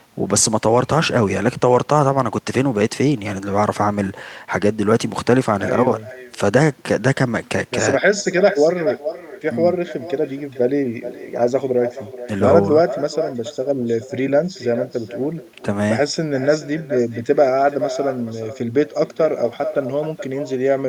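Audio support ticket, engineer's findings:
Echo with no canceller, present throughout the speech. Every phrase is followed by a thinner copy roughly 400 ms later, about 12 dB down. Probable component: far-end loudspeaker feeding its microphone, with no echo cancellation removing it before return over the network. Distinct from room reverberation: a discrete, late repeat of the whole phrase, not a smeared tail decaying straight off each syllable.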